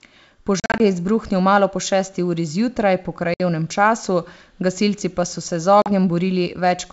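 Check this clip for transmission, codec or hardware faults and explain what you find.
The wideband G.722 path is clear; the audible faults are three instances of packet loss on an ADPCM call. From 0.60 to 0.81 s, 120 ms of speech is lost in scattered gaps over 200 ms, the longest 40 ms. From 3.34 to 3.40 s, 60 ms drops out, and from 5.82 to 5.90 s, 40 ms. Each hole is filled with hard-edged silence, and the decoder's adaptive predictor and step size drift from the sender's. Speech returns with slight distortion, then settles within tens of milliseconds.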